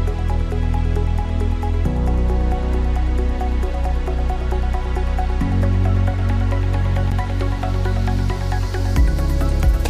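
There's a block of digital silence at about 7.11 s, roughly 11.6 ms of the signal dropped out and then snapped straight back with no fade in or out. Because it's so short, it comes across as a quick tick rather than an audible hole, with the hard edges at each end doing most of the work. That length fits a 512-sample buffer, so the program most likely didn't fill the output buffer in time.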